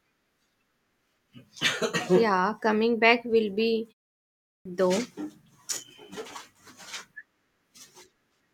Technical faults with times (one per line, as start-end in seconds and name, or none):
4.28-4.65 clipped start after a pause